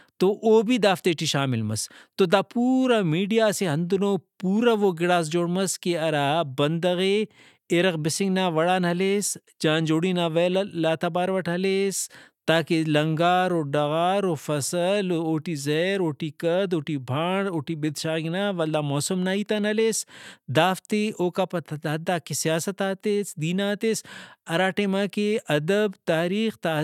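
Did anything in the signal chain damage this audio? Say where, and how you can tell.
No, nothing in the chain audibly damaged this speech.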